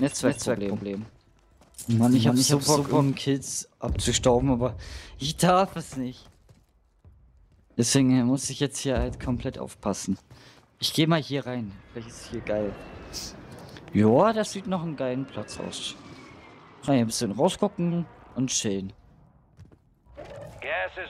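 A second copy of the signal is likely being captured through a slower path and mixed back in. The result is a doubled audio track already under way when the audio begins and running to 3.08 s. A full-band duplicate trails the original by around a fifth of a second at roughly the same level, so every onset is heard twice, with no decay or room colour on the repeat, until the copy cuts off abruptly at 3.08 s.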